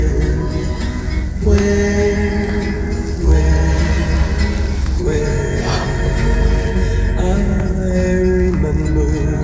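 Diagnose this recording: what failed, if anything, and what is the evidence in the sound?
Nothing in the signal path failed: there are no breaks in continuity, level or timing that would point to a problem at any stage.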